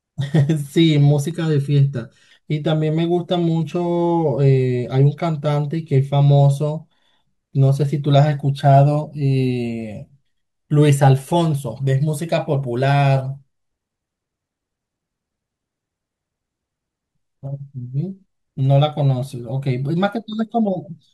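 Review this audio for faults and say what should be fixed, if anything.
From 1.31 to 2.31 s the speech turns hollow and phasey, and that's channel delay (comb filtering): one side lags by under a millisecond, so the mono sum cancels at evenly spaced notches starting around 700 Hz. Check channel alignment before any mono fold-down to prevent it.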